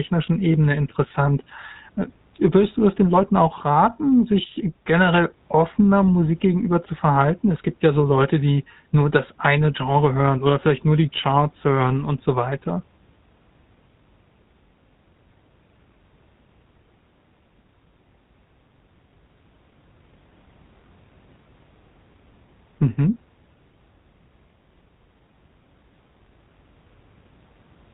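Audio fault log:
Throughout, GSM full-rate codec: the speech has a buzzy, gravelly roughness and no content above 4 kHz, which fits a 13 kbps vocal-tract coder that rebuilds the excitation from sparse, evenly spaced pulses, discarding most excitation detail and leaving plainly audible coarseness.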